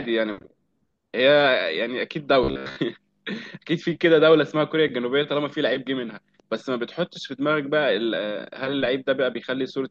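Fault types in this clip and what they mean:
Robotic sound from repeated short buffers: From 2.44 to 2.77 s, the speech becomes a rigid, metallic buzz pitched at 66.7 Hz. It still loosely follows the speech underneath. The likely cause is audio arriving too seldom, so playback fills each gap by repeating a short slice. A 66.7 Hz buzz fits a slice of about 15 ms. Most of that stretch is repeated material, and the real audio it replaced is skipped.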